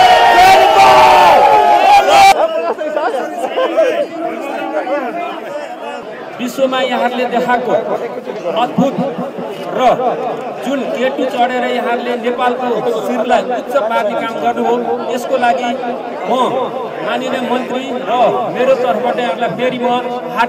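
No technical faults are audible anywhere in the clip.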